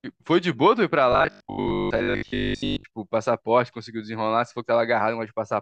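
From 1.12 to 2.84 s the speech becomes a rigid, metallic 50 Hz buzz that loosely tracks the words: robotic sound from repeated short buffers. Audio likely arrived too seldom, so most of this stretch was filled by replaying a 20 ms chunk.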